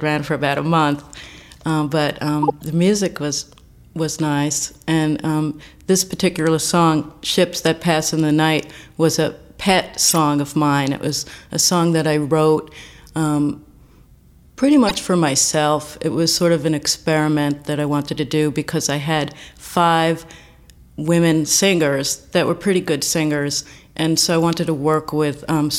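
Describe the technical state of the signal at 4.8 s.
A brief, faint chirp, squeak, blip or burst of noise sits from 4.70 to 4.78 s: a corrupt frame decoded, where damaged compressed data was played anyway, misplacing energy across roughly three frames.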